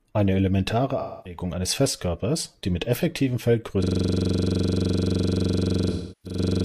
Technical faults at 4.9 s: system hang loop

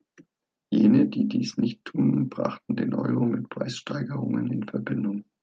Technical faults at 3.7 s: none

